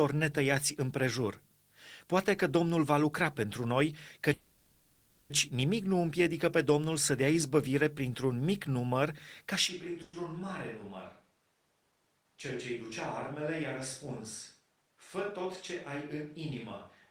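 Speech, with four kinds of fault. A call audio freeze follows "va lucra pentru noi" at 4.33 s: the last sound is stretched into a fading buzz for about 0.99 s before "nimic nu împiedică pe" resumes intact, and a shorter 0.11 s freeze occurs at 10.02 s. These are likely caused by late packets draining the jitter buffer. Unlike a dropout, time is inserted rather than lost. A dropped buffer (overrun) gives a jump in the sound at 5.16 s and again at 8.15 s after "să dea izbăvire". Each loses about 20 ms with no gap, which fits a likely overrun of a buffer around that size. That abrupt splice is what separates it from the smooth, decaying fill of a freeze. From 9.70 s to the end the sound turns roomy and hollow, thinner in the bass and roughly 10 dB quieter, with room noise only about 35 dB below the speech. This sudden, lasting change points to a likely switch to a distant microphone rather than an EQ or gain change, since the reverberant character arrives all at once. 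Between 14.60 and 15.46 s a jitter buffer speed-up makes the speech run about 7% fast at unchanged pitch. Around 70 ms is trimmed away in tiny pitch-period cuts, which is why it sounds hurried without the chipmunk shift of a resampling error.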